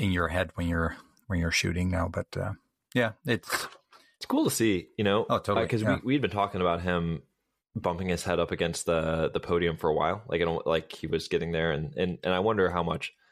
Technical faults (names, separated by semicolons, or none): none